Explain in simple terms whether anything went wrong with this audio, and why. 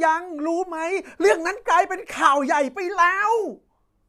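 Nothing went wrong here.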